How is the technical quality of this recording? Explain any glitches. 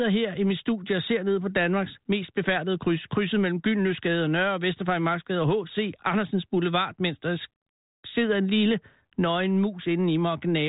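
No glitches or technical faults can be heard here.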